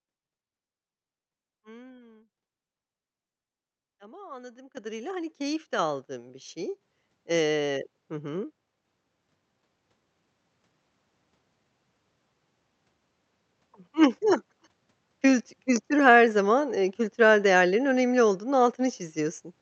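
At 4.77 s the microphone volume steps up by about 11 dB. The call software judged the input too quiet and raised the device gain in one jump. Voice and background rise together, instantly. It steps up again at 5.79 s, by about 5 dB, between "hani keyif de" and "aldığın bir şey". Another 5 dB step follows at 6.81 s, after "de aldığın bir şey". A last step of about 3 dB comes at 8.85 s, after "hı hı". The call path's codec limits the audio to 8 kHz.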